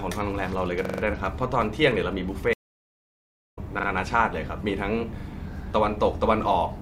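From 0.85 to 1.02 s, a repeated buffer stutters the speech. A 43 ms slice, fitting a 2048-sample buffer, replays four extra times with hard joins. At 2.53 s a stream reconnect cuts the sound for about one second. Speech resumes at 3.59 s, roughly a second further on. Shorter repeated-buffer stutters follow at 3.79 to 3.88 s and 5.20 to 5.24 s.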